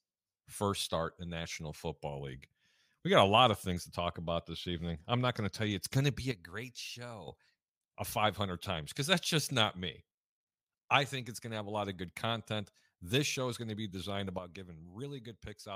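A sudden gain jump at 6.32 s drops the speech and its background noise together by about 10 dB, holding there until 7.28 s, when the level snaps back. The same drop recurs at 14.39 s and lasts to the end of the clip. Both steps are instant, with no fade, and the noise floor shifts with the speech. The likely cause is a digital gain setting applied abruptly rather than ramped.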